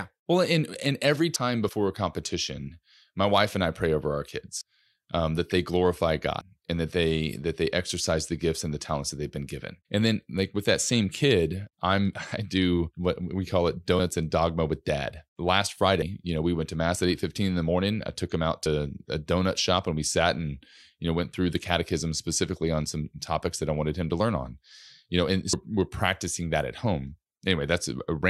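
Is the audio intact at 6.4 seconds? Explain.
No. At 6.41 s, between "um that they glorify" and "and that they that", the speech jumps ahead. This is a dropped buffer (overrun), likely from samples not read before being overwritten. Roughly a tenth of a second is lost, with no gap left.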